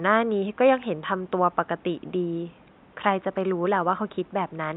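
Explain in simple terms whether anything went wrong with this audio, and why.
Nothing went wrong with this speech recording that I could hear; the faint background noise of the room sits well beneath the speaking and is simply part of where it was recorded.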